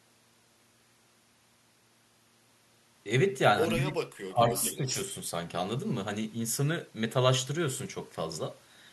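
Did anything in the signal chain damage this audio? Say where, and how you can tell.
Yes. Speech suppressed in double talk shows up in call processing at 3.76–3.99 s, 4.28–4.43 s and 4.59–4.88 s, with dips of roughly 10, 20 and 15 dB. The waveform envelope caves in and the spectrogram thins across the band. The likely cause is an echo canceller mistaking overlapping talk for echo and ducking both.

Echo leak, also from call processing, runs from 4.49 to 5.03 s. A copy of the speech trails by 236 ms at about 10 dB below the original. On a spectrogram it appears as faint repeated harmonic patterns shifted right. The canceller likely passed residual loudspeaker pickup back.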